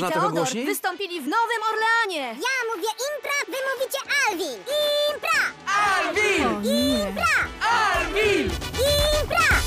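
No dropouts, clicks, clipping, level jumps or other transport or processing faults are audible anywhere in the clip.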